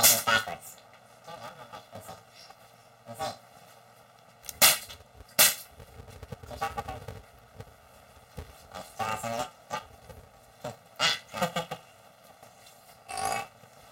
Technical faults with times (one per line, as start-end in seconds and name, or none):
0.00-13.91 planar audio read as interleaved